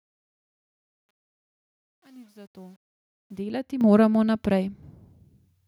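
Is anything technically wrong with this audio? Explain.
Yes, two faults. From 0.0 to 3.41 s there is truncation distortion on a fade: the fade-in is quantised without dither, consistent with an 8-bit stage. Through 3.03 s the speech sounds gritty, with a staircase waveform and broadband speckle on a spectrogram. At 3.81 s the microphone volume steps up by about 9 dB. Voice and background jump together, showing as an abrupt envelope step and uniformly brighter spectrogram.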